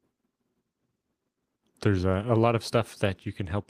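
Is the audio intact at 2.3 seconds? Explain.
No. Between 2.27 and 2.29 s, after "there's a" and before "a lot of", there is a lost packet rebuilt from error correction. A 20 ms stretch, which fits a single lost packet, never arrived intact. The decoder filled it from the low-bitrate copy carried in the following packet, so there is no gap or dropout. That brief section of speech sounds rougher and noisier than the surrounding audio.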